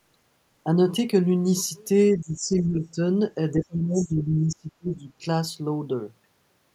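From 2.14 to 2.99 s, speech dips by roughly 15 dB, then from 3.53 to 5.1 s by nearly 30 dB. This speech suppressed in double talk is likely the echo canceller ducking the talker while both sides speak. At 3.97 to 4.07 s, the other side's voice leaks through as a brief fragment about 20 dB down, likely residual loudspeaker echo, distinct from the talker's own suppressed speech.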